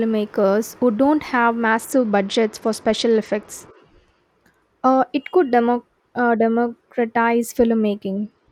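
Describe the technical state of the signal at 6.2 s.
Nothing is wrong with the signal at 6.2 s; the speech there comes through intact, with no dropout, clipping, distortion or other audible fault.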